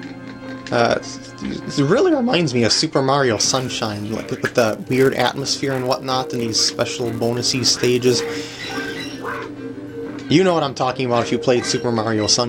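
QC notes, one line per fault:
3.37 to 9.37 s: filter restarted on every block. A steady buzz at 172 Hz rides on the sound for these six seconds. Its loudness rises and falls with the signal. The filter drops its memory at each block boundary and starts again from silence. That leaves a small transient at the start of every block. Those repeated clicks fuse into a tone at the block rate, which fits a 256-sample block.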